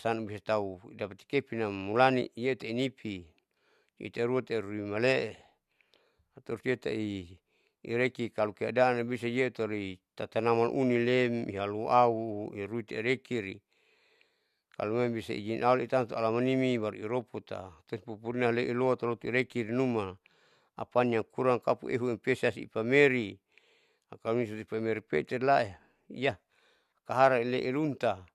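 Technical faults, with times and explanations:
Nothing to flag here, as this speech recording has no technical faults to list.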